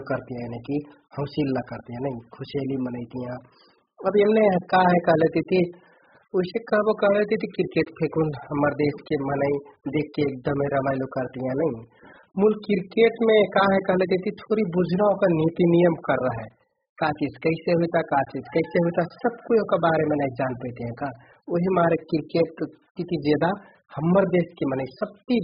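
AAC compression runs throughout the recording. Nothing reaches above 5 kHz, so the speech sounds dull and boxed-in. Sibilants and sustained sounds are smeared into a warbling, fizzy texture, as though parts of the spectrum had dropped out. The likely cause is AAC-LC coding at a very low rate, with damage consistent with something near 8 kbps. The encoder has too few bits, so it lowers its cut-off, discards fine spectral detail, and leaves gaps that destabilise the sound from frame to frame.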